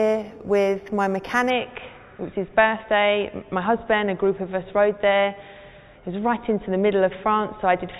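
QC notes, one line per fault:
0.0–1.5 s, imaging from linear upsampling: dull top, faint metallic shimmer; straight-line interpolation from what sounds like an 8 kHz source mirrors the spectrum into 4–8 kHz, about 30 dB down.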